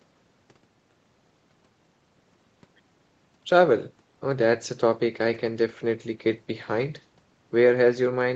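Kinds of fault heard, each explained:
Nothing stood out as a fault on listening to this speech, which shows only the ordinary shaping of call microphone processing, with its lowest bass trimmed and no content above 8 kHz.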